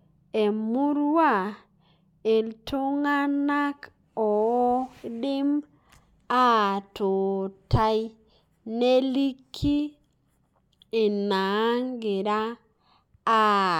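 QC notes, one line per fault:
No faults found; the speech is intact with no audible problems.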